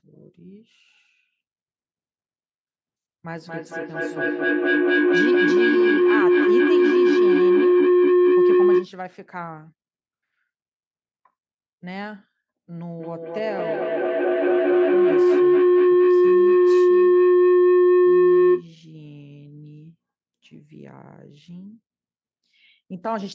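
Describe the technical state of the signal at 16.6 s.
A sustained howl near 400 Hz dominates the signal at 16.6 s, its loop repeating about every fifth of a second and peaking about 15 dB above the speech. It is feedback howl, running from 13.0 to 18.7 s: two devices on one call share a room, so each pass through microphone and loudspeaker adds level.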